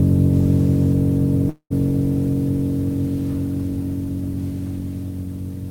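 At 1.49 s the music stalls in a call audio freeze until about 1.73 s: the last sound is stretched into a fading buzz, then roughly 90 ms of silence, most likely because delayed packets drained the jitter buffer. Unlike a dropout, nothing is lost. The music resumes exactly where it stopped, now running 211 ms later.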